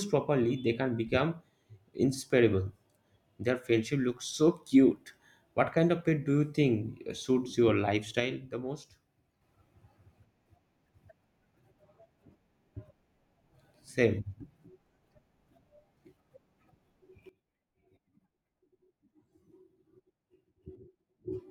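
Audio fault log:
8.2 to 9.41 s, sudden gain jump: the speech and its background noise drop together by about 6 dB in one step, then return at 9.41 s, likely from a gain setting applied instantly without a ramp.
17.29 s to the end, sudden gain jump: level and noise floor fall abruptly by about 15 dB and stay down, again with no fade, likely a digital gain change or bit shift taking effect between consecutive samples.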